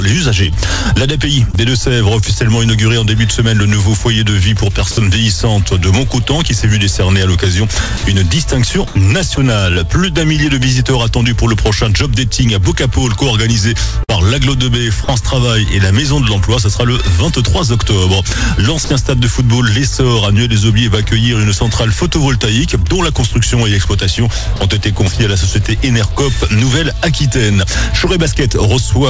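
At 1.52 to 1.55 s there is a short concealed packet loss. About 20 ms of audio never arrived, and the receiver extended the preceding sound for roughly 14 ms before blending back. It is heard as a brief smear. On a spectrogram the harmonics or noise texture freeze for a sliver of time.

At 4.91 to 4.97 s, and again at 7.97 to 8.03 s, sound is dropped by the voice detector, which likely mistook quiet material for background. In each case 60 ms is replaced by steady comfort noise. A waveform shows a flat, low-level band. The spectrogram shows smooth, featureless noise in place of detail.

From 8.87 to 9.37 s the sound is chopped by the voice detector as it likely toggles on and off, and about 100 ms in total becomes comfort noise. The result is choppy. A spectrogram shows alternating patches of real content and uniform noise.

At 14.03 to 14.10 s a burst of packet loss removes about 60 ms. 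Roughly 50 ms of it is filled by continuing the last sound while fading it down, giving a held buzz or hiss before the audio resumes further on. The waveform shows a decaying repetitive stretch.

Further likely voice-detector dropouts follow at 15.04 to 15.08 s (40 ms), 18.84 to 18.90 s (60 ms) and 24.56 to 24.60 s (40 ms), each appearing as the same flat noise patch. Throughout the clip, the spectrogram is empty above 8 kHz, which fits G.722 on the call path.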